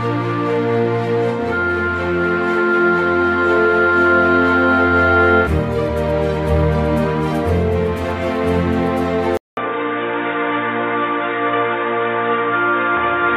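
At 9.37 s the sound drops out for about 200 ms, and when it comes back it's noticeably duller and boxier, with nothing above about 3.8 kHz, through to the end. The level stays roughly the same, but there's a new, faint noise floor sitting well below the signal, around 40 dB down. That pattern points to the input switched to a poorer device, most likely a fallback microphone or a headset's narrowband call profile taking over.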